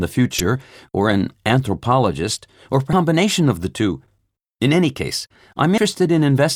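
Damaged data in a compressed stream disrupts the speech at 0.38 to 0.40 s, just before "or an anthropologist or", then at 2.93 s before "of the two", and at 5.78 s. Corrupted frames leave the decoder misreading them and hunting for sync, producing brief glitches.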